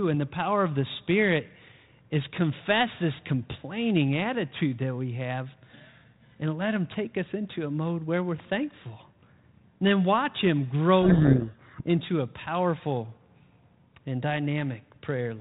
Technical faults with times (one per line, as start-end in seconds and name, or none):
11.02-11.82 codec payload misread